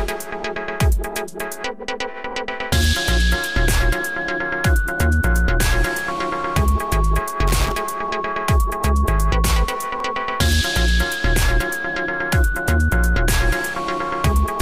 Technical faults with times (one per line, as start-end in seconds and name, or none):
7.47-7.72 loose connector crackle